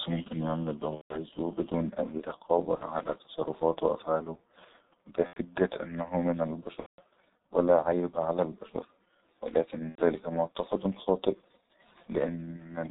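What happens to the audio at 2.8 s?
Between 2.75 and 2.84 s, after "بدون اي" and before "علي تصرفاته وأفعالو", VoIP packet loss concealed by the speech codec cuts in. About 60 ms is missing, which fits two lost 30 ms frames. The decoder repeats its last pitch and filter at falling gain. The sound smears into a fading buzzy tone or coloured noise, and it stays weak briefly after packets return.

Under this, the G.723.1 codec at 6.3 kbit/s damages the speech heavily. Nothing passes above 4 kHz. Its slow model updates leave the speech muffled and hoarse, with blurred consonants.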